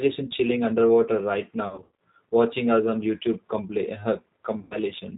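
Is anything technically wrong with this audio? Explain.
Yes. The speech runs through the G.729 codec for its whole length, and it has two stretches of VoIP packet loss concealed by the speech codec.

The G.729 coding is plainly audible throughout. At 8 kbit/s, each 10 ms frame is rebuilt from a vocal tract filter, a pitch predictor and a handful of pulses, so everything above 4 kHz is gone. The voice sounds slightly rough and synthetic. A simple low-pass filter would leave the voice smooth, so the roughness rather than just the dull top is the codec's signature.

The packet loss falls at about 1.69–1.91 s and 4.59–4.77 s. In the first stretch, 180 ms of audio is missing, scattered across 300 ms, with the longest run at 90 ms. The second loses 120 ms, which points to 30 ms packets. The decoder fills each gap by extending its last pitch and filter at falling gain, so the speech smears into a fading buzz or coloured noise and stays weak briefly after the packets return. 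A plain dropout would cut to silence or click instead.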